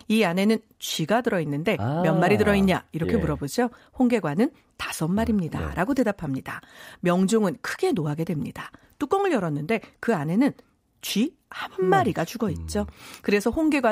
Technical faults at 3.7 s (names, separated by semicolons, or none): none